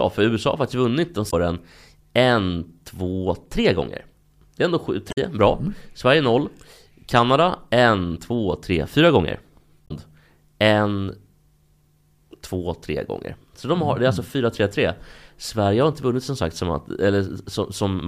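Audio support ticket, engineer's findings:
Damaged data in a compressed stream. Corrupt bytes in three spots; decoder misreads frames, loses sync, hunts for next frame header. Audible as short chirps, squawks, clicks or holes breaking the speech: 1.27–1.34 s, 5.08–5.17 s, 9.84–9.91 s, each roughly 70–90 ms. Probable component: file or stream transport upstream of decoder, not the decoder itself. Check source integrity and delivery path.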